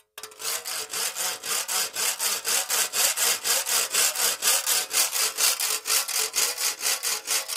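An everyday sound recording with periodic USB or driver dropouts. From 0.07 s to 4.06 s, a tiny piece of audio vanishes once every 1.0 s, about five times in all. Each gap lasts roughly a millisecond and is filled with silence. The result is a regular tick over the sound, audible only while signal is present. Something is blocking the USB bus or audio driver on a fixed schedule.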